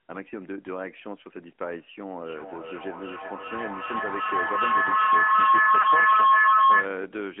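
From the start the speech is carried by the AMR narrowband mobile codec. The band is squeezed to roughly 250 Hz to 3.4 kHz. Nothing above that survives. The codec rebuilds each frame from a vocal tract model and a few pulses. Too few bits leave the voice buzzy and synthetic. The damage is plainly audible throughout. The character fits the 10.2 kbps mode of AMR-NB.

At 2.22 s a feedback howl begins. Two devices in the same room share the call. Sound leaks from a loudspeaker back into a microphone and gains level on each trip. The repeats grow instead of dying away. They narrow to a tone around 1 kHz. The loop's round trip is about 0.4 s. At its loudest it sits about 12 dB above the speech. It runs until 6.97 s.

Inside the howl, from 5.82 to 5.85 s, there are lost AMR speech frames. A radio error made a frame fail its check. The decoder reused the last good pitch and vocal tract settings at falling gain. 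The result is a brief dip or warble. The gap fits a single lost 20 ms frame. The voice returns weak or rough for a moment.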